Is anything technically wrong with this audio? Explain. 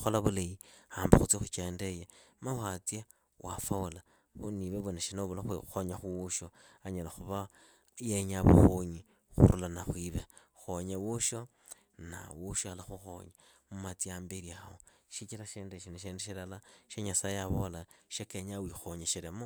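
No, nothing technically wrong can be heard here.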